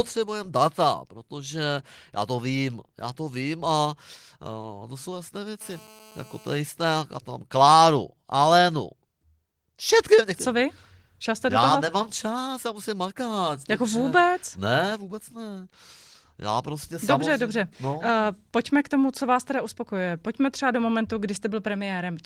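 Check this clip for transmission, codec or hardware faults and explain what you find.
There's one clear fault, a GSM phone buzz. From 5.61 to 6.61 s, right after "to jsou jasné", a hard, raspy 217 Hz buzz sits about 26 dB under the speech. A nearby 2G handset on a call is bursting 217 times a second, and the audio circuitry is rectifying those radio pulses into a steady, harmonic-rich rasp that has nothing to do with the speech.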